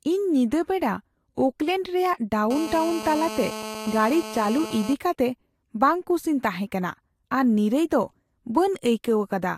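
Speech, with GSM phone buzz from 2.51 to 4.94 s, ending just before "ᱠᱟᱛᱮ ᱵᱟᱝᱼᱠᱩᱥᱤᱧ ᱛᱟᱦᱮᱸ ᱠᱟᱱᱟ". A nearby 2G phone on a call pulses about 217 times a second, and the audio circuit rectifies it, giving a steady raspy buzz about 11 dB below the signal. A spectrogram shows evenly spaced harmonic lines from 217 Hz upward, and the waveform shows regular pulse trains.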